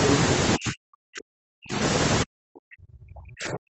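Speech suppressed in double talk, 0.57 to 1.78 s: for about a second in total the voice sinks by up to about 40 dB, thinning and breaking into fragments. This is likely the echo canceller mistaking overlapping far-end talk for echo and pulling the near-end voice down with it.

Short stall from a late packet, 1.43 s: inside that suppressed stretch, a packet arrived late and the jitter buffer ran dry. The receiver held the last sound for about 80 ms, a brief smeared buzz, then resumed where it stopped. Nothing is lost, but everything after plays about 80 ms later.

Speech suppressed in double talk again from 2.23 s to the end: the same ducking returns, with the voice dropping by up to about 40 dB and losing its brightness in patches while the other side is presumably talking.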